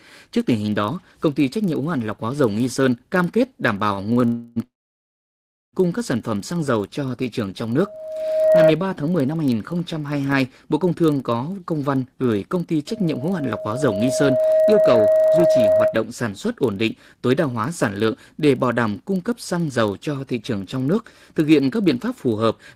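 A filter restarted on every block runs through the whole recording. Its state resets every 40 ms, so each block opens with a small transient. This produces a 25 Hz buzz of ticks that rises and falls with the speech level.

Short stalls from a late packet occur at 4.13 to 4.19 s and 4.21 to 4.24 s. Each time, the jitter buffer emptied and the receiver held the last sound for 33 ms and then 16 ms. Nothing is lost, but the speech briefly sticks with a slight buzz or dip.

Call audio freezes follow at 4.26 to 4.58 s and 4.64 to 5.75 s, likely from packets held up in transit. The first fills about 0.3 s with a fading continuation of the last sound. The second extends for about 1.1 s and sinks to silence for most of that time. The speech then resumes at "các sản" with nothing missing, only delayed.

Loudspeaker feedback squeal appears after "cho thị trường trong", from 7.81 to 8.73 s. It returns after "văn gửi công ty", from 12.88 to 16.01 s, ending before "sản xuất ổn định". 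The loop gain exceeds one at 630 Hz, so that tone grows on its own. The first squeal swells within well under a second to sit clearly above the speech. The second builds over a second or two and stays a few decibels above it.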